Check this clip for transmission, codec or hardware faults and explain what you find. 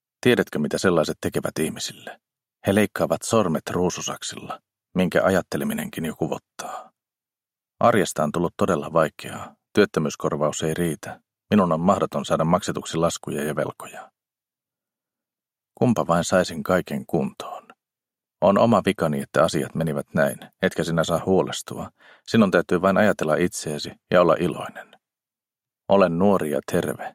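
Nothing stood out on listening through this clip.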